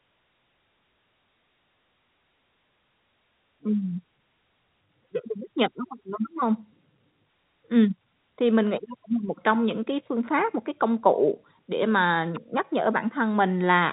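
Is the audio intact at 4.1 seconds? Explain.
Yes, the audio at 4.1 seconds is intact, with the speech coming through the G.711 telephone path without a fault at that moment.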